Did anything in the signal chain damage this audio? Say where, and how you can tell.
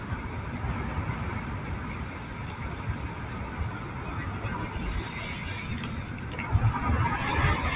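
Yes. A speech noise suppressor in the call processing was applied to these sounds. Throughout, sustained parts and tails dip by roughly 5 dB while onsets pass, unlike the G.711 codec's steady 4 kHz cutoff.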